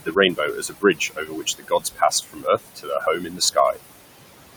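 Throughout, a noise suppressor pulls the steady room noise, sitting about 12 dB below the speech, down by about 20 dB frame by frame. Noise suppressor artifacts result, with the noise sinking between the words and rising under the speech. From 0.00 to 0.17 s and again from 0.33 to 3.57 s, the suppressor mistakes parts of the speech for noise. In the first stretch the drops reach about 18 dB and add up to roughly a tenth of a second. In the second they reach about 20 dB and cover roughly two seconds. This speech cut by the noise suppressor leaves consonants and word endings swallowed and faint.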